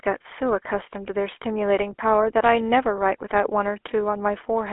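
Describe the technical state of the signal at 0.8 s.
At 0.8 s the speech carries GSM full-rate codec damage, present throughout the clip. The codec rebuilds the voice from a vocal-tract model excited by sparse regular pulses. Bandwidth stops near 3.4 kHz. The result is a plainly audible buzzy, gravelly roughness.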